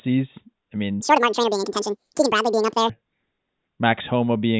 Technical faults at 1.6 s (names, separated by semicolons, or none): wrong sample rate